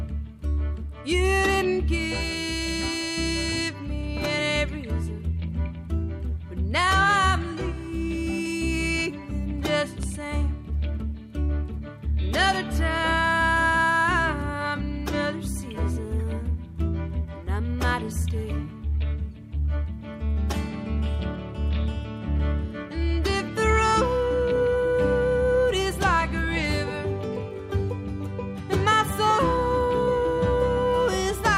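At 10.03 s a single loud pop lasting about 20 ms cuts through, peaking roughly 10 dB above the surrounding level. It is most likely an electrical transient, such as a switch or static discharge, adding a brief voltage pulse that the following circuitry rounds into a thump. Unlike a dropout or buffer glitch, nothing is lost: the sound continues unbroken underneath, and the burst occurs once rather than repeating.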